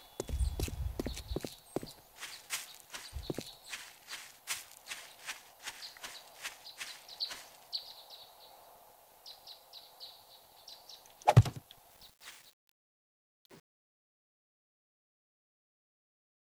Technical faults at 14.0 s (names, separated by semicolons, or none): truncation distortion on a fade